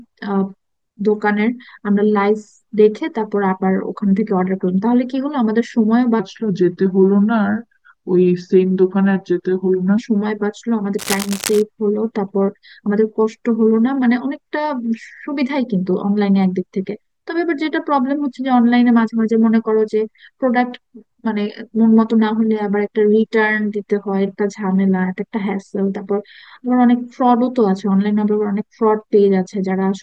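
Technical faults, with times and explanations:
6.20 to 9.98 s, section at the wrong speed: the speech slows to about 0.855 of its proper rate, so it drags and drops by roughly three semitones, deeper and heavier. Pitch and tempo fall together and snap back at the boundaries, unlike a pitch-shift effect, which keeps timing intact. Likely a clock or playback-rate mismatch.
10.98 to 11.62 s, cable scratch noise: a dense, irregular scratching and rustling rides over the speech for about 0.64 s, around 10 dB below it. The bursts are uneven and broadband rather than single clicks or a steady hiss, pointing to a likely worn cable or connector being moved.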